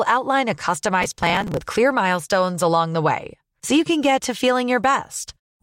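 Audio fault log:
1.02–1.61 s, processor overload crackle: the processor falls behind and misses dozens of buffer deadlines, with spacing that fits buffers of around 5 ms. Each missed buffer is skipped outright, leaving hard-edged gaps that pile into a gritty tearing over the speech until the load eases.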